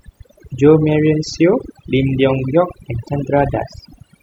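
A speech recording with overdone noise removal running the whole way through. The reduction was set too strong. It cuts frequency bands near its noise estimate, taking quiet voice detail too. The background drops and breaks up into twinkling specks.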